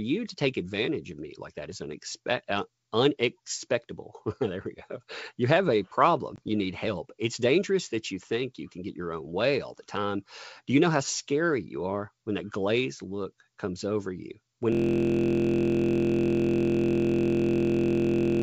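It's a speech clip on what sounds like a G.722 wideband call. Right after "have a", at about 6.36 to 6.39 s, there's packet loss on an ADPCM call: a hard-edged gap of about 20 ms, roughly one packet, gets filled with silence. The decoder's predictor and step size lose track of the sender's, so the speech comes back slightly distorted before it settles. Then from 14.72 s to the end there's a system hang loop. The machine froze while the sound hardware kept replaying the same 23.22 ms stretch of its ring buffer, which gives a steady buzz at about 43.1 Hz and fits a 1024-sample buffer.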